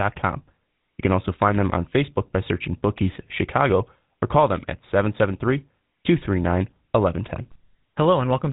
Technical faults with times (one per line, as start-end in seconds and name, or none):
0.00-8.52 GSM full-rate codec